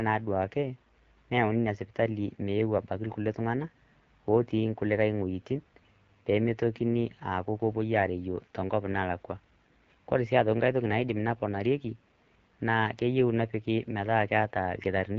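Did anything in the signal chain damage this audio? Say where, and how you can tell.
Yes. The damage happens at the codec stage, and it runs through the whole speech clip. This is the AMR wideband (HD Voice) codec at a low rate. The speech sounds rough and raspy throughout, which fits AMR-WB at about 8.85 kbit/s. Nothing reaches above 7 kHz. The codec models the voice as pulses through a vocal tract filter up to 6.4 kHz. It fills the band from 6.4 to 7 kHz with shaped noise. At this rate that pulse model leaves clearly audible harshness.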